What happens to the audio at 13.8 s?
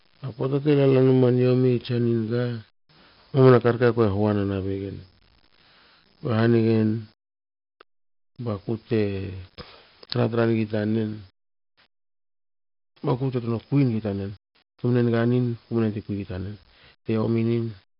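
From 13.28 s to the end of the clip, the speech suddenly runs about 1.35 times faster while its pitch stays where it was. It sounds rushed. This is a time-stretched section. The cause is likely software that squeezed the passage to fit a shorter length, keeping pitch by dropping short fragments rather than playing everything faster.

At the same moment, as everywhere in the clip, a gritty hiss rides on every louder sound and sharp onsets crack with distortion. The top end is dull, with nothing above about 5.3 kHz. This is heavy 4-bit ADPCM compression, which fits a rate near 44 kbps. Each sample is stored as a coarse step from a prediction, so the quantisation error rises and falls with the speech, and the step size can't keep up with sudden attacks.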